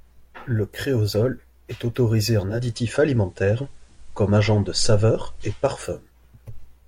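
Just after "créosol est autorisé", at 2.4 s, the digital radio blends to analogue. The receiver lost its digital stream and cross-faded over 365 ms to the FM broadcast of the same station. A faint hiss comes up, around 40 dB below the speech. The level shifts by about 1 dB. The FM sound continues until 6.18 s, when the digital signal takes over again.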